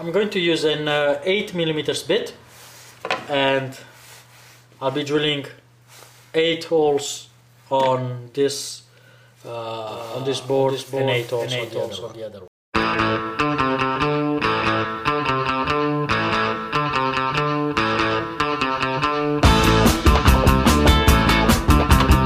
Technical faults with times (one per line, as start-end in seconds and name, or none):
9.88-12.48 doubled audio track